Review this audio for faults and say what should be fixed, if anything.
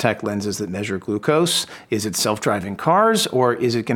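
Nothing in this audio needs to be fixed, because it has no faults.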